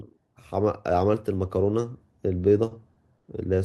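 At 2.68 s, 2.93 s and 3.18 s, short stalls from a late packet hold the speech for about 30, 30 and 50 ms. The jitter buffer emptied, so the last sound was stretched until data arrived. Unlike a dropout, nothing is skipped afterwards.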